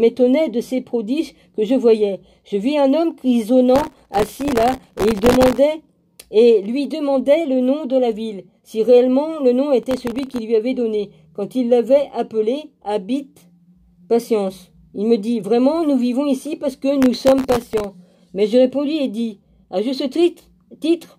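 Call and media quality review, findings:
Processor overload crackle at 3.76–5.58 s, 9.83–10.38 s and 17.02–17.84 s. Gritty tearing riding on the sound, longest in the first burst. Audio processing thread missing buffer deadlines. Each miss replays a sliver of old audio with hard edges. The grain fits a very short buffer, under a millisecond.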